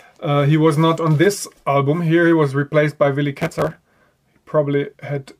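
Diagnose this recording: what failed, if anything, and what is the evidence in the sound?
Processor overload crackle at the driver and buffer stage, from 3.34 to 4.04 s: a gritty tearing burst rides on the sound. Tiny buffers, under a millisecond each, missed their deadlines, and roughly a hundred were skipped. A waveform shows dense hard-edged discontinuities; a spectrogram shows vertical broadband streaks.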